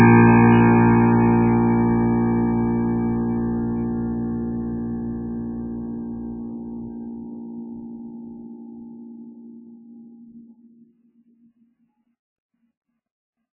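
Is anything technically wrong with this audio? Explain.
Yes. The whole music track shows heavy MP3 compression, likely from a very low bitrate around 8 kbps. Everything above about 2.9 kHz is gone, and the starved encoder drops weak frequency lines from frame to frame, leaving a watery, swirly texture with smeared attacks.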